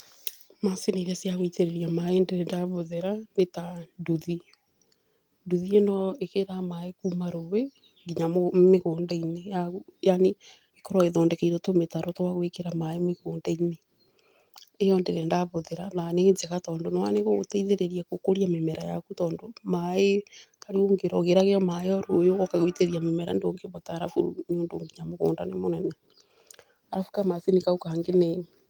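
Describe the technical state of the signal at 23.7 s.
At 23.7 s the speech signal is intact, with no audible technical fault at that moment.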